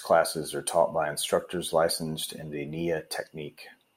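Speech recording, no audible faults.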